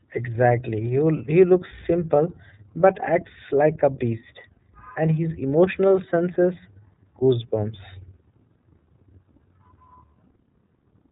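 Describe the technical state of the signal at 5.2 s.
At 5.2 s the speech is passing through the iLBC codec, as it does for the whole clip. The codec rebuilds each 30 ms frame's excitation independently of the one before, at a rate that fits iLBC's 13.33 kbps mode. The damage is plainly audible: the speech stays clear but has a rough, slightly synthetic texture, and everything above 3.8 kHz is gone, leaving a narrow, telephone-like band.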